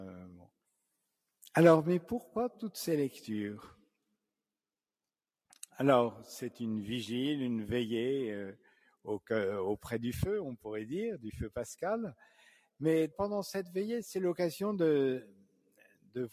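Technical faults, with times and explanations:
Throughout: noise suppressor applied to music or sounds. The level keeps rising and sinking by around 5 dB, so the sound pumps, flutters or thins out. A suppressor built for speech stayed active and treats steady tones, ambience and reverb as noise, turning them down. Sharp onsets pass more or less intact, while sustained parts and decaying tails are pulled back.
8.59–9.3 s, 12.18–12.81 s, 15.24–16.16 s: sound cut by the noise suppressor. In each span the sound sinks well below its surroundings. The deepest dips are about 18 dB, about 12 dB and about 18 dB. About half a second is affected in each of the first two spans and about a second in the last. Here the suppressor judged the audio to be noise and reduced it more than the rest, shortening held and fading material.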